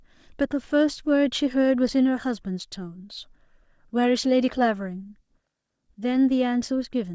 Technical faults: none

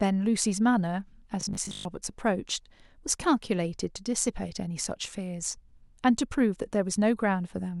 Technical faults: robotic sound from repeated short buffers

